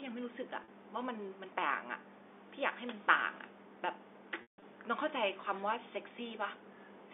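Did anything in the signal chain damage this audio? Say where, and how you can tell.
Yes, packets were lost on the network, and the receiver covered the gaps with packet loss with pitch repetition. At 0.64 s a 40 ms gap is filled by a repeated pitch cycle that sounds held and buzzy. Around 4.42 to 4.62 s a 160 ms run fades to silence before the speech cross-fades back in.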